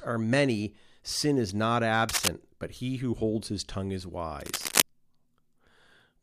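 Cable scratch noise appears from 2.09 to 2.29 s, right after "many sin is not" and before "but he who holds", and again from 4.40 to 4.82 s, following "holds his tongue is". Each time a dense, uneven burst of scratching and rustling sits over the speech at roughly the same loudness. The likely cause is a worn cable or connector being moved, its contact resistance jumping rapidly and briefly.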